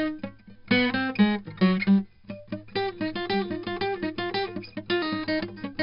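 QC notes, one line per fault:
Throughout, 4-bit ADPCM compression: every sample of the music is a coarse 4-bit step from a prediction, so heavy gritty hiss follows each loud passage and sharp attacks distort; nothing sounds above 5.3 kHz, fitting a low-rate stream around 44 kbps.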